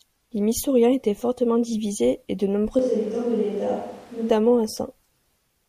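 From 2.79 to 4.30 s, after "fortement divisés et de", the speech likely switches to a distant microphone. It turns suddenly roomy, the waveform shrinks, the spectrogram's lows thin and its noise floor rises.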